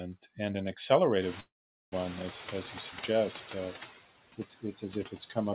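Noise suppressor artifacts run through the whole clip. The steady background is pulled down by about 13 dB, sinking in the pauses and rising again beneath the speech. This frame-by-frame pumping is constant, unlike the single slow fade described next.

From 1.21 to 3.93 s comes noise suppressor catching up. The room noise jumps by about 19 dB at roughly 1 s. The suppressor's estimate lags, so the louder noise passes with little reduction at first and then settles about 10 dB lower over roughly 2.2 s. It is one gradual descent, not pumping around the words.

Inside that stretch, from 1.40 to 1.94 s, is a call audio freeze. The last sound is stretched into a fading buzz or hiss and then about 0.42 s of near-silence. The sound then resumes exactly where it stopped. Nothing is lost, but everything after it arrives about 0.52 s later. This was likely caused by delayed packets draining the jitter buffer. 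Because nothing is missing, it is a pause rather than a dropout.

From 5.07 to 5.36 s there is speech cut by the noise suppressor. Roughly 150 ms of quiet speech detail is dragged down with the background, by about 10 dB at its deepest, and sounds swallowed. This is a dip within the speech itself, not a silence, and it stands apart from the freeze.

Throughout, nothing is heard above 4 kHz, which fits a narrowband G.711 call path.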